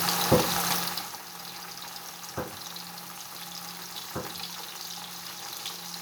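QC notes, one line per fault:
No technical faults are evident; there are no disruptions, distortion or level problems anywhere in the audio.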